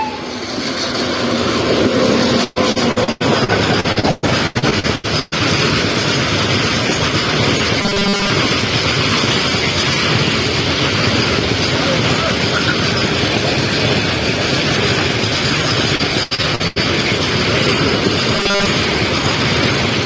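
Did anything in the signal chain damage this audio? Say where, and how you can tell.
Yes. At the network and jitter-buffer stage, repeated packet loss (robotic sound) struck twice: from 2.44 to 5.35 s and from 15.96 to 16.79 s. Packets kept failing to arrive, and each hole was papered over by stretching the preceding audio. About a third of each stretch is patched rather than real, with holes of up to 121 ms in the first and 84 ms in the second. The sound turns choppy, with pieces missing.

At 7.81 to 8.30 s and again at 18.36 to 18.66 s, there is robotic sound from repeated short buffers. The audio collapses into a rigid 200 Hz buzz that still follows the sound's outline. This most likely happened in the driver or buffer stage: fresh audio came too seldom, so a tiny chunk was replayed over and over while most of the real signal was skipped. A 200 Hz buzz fits a 5 ms buffer looping. The G.722 call path, with nothing above 8 kHz, sits underneath both faults.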